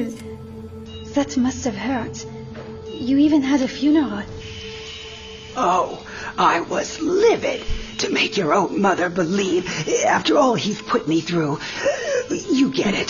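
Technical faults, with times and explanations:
0.86 to 13.1 s, adaptive stream at a lower bitrate: the stream switched to a much leaner encoding, so everything above 6.9 kHz vanishes abruptly, with no gap and coarser codec artefacts.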